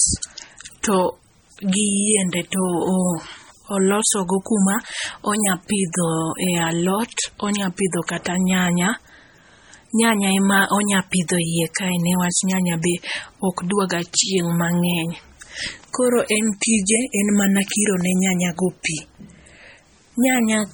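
Throughout the clip, the speech was likely squeezed through MP3 compression at a very low bitrate, with heavy damage that fits something around 32 kbps. Starved of bits, the encoder discards weak frequency lines and lets others flicker in and out between frames. The result is a watery, swirling texture over the speech, metallic chirping on s sounds, and softened, smeared onsets, while the band itself still reaches up to about 20.4 kHz.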